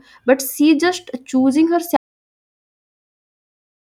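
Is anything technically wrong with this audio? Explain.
Yes, there's one problem. At about 1.97 s the speech drops out to silence and never comes back, so everything from there to the end is missing. It's a proper audio dropout to silence: dead silence with no room tone underneath, which is how you can tell it isn't just a pause. The likely cause is the input getting lost partway through, maybe a disconnected mic, a failed link or an accidental mute, while the recorder kept writing blank samples.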